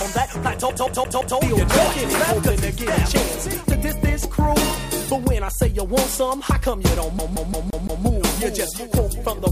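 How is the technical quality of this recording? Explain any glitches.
The recording has two glitches of one kind, a CD stuck on one turn. From 0.70 to 1.38 s, then 7.19 to 8.05 s, a scratch throws the laser back one track. The same 172 ms replays four, then five times, with brief mutes, giving a fast, even stutter.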